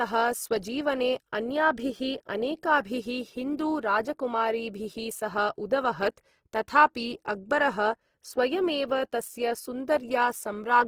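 From start to finish the speech carries a grainy, rough texture, with the highs sounding hashy and fizzy rather than swirly. That points most likely to Opus compression at a low rate, something around 16 kbps, with the encoder still in its music-style mode and still running fullband. When bits run short it fills starved bands with folded or noise-like content, so the damage is plainly audible as a coarse, sandy edge over the whole clip.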